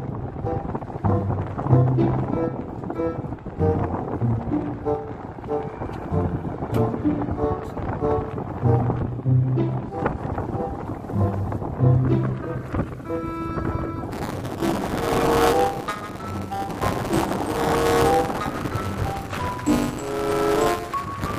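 From 14.10 s onward, a robotic 200 Hz buzz is heard: buffer tearing, where writer and reader cross each period, splicing in slivers about 10 ms stale.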